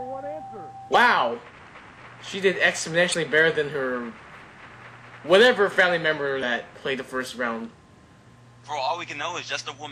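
At 0.90 to 0.95 s, 3.10 to 3.14 s and 6.39 to 6.43 s, damaged data in the compressed stream produces brief glitches, each about 45 ms long. Corrupted bytes make the decoder misread those frames and lose sync until it finds the next valid frame header.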